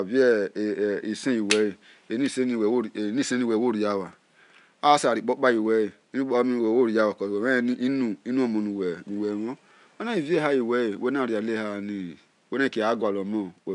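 No technical faults are audible.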